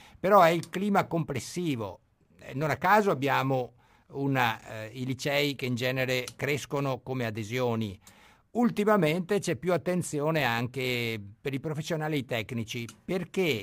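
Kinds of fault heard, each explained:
Crude rate conversion: samples were repeated rather than filtered, which fits a 32 kHz to 48 kHz change, leaving a gritty fizz about 25 dB under the speech throughout. A spectrogram shows faint mirrored images of the speech harmonics, and the waveform shows small stair-steps.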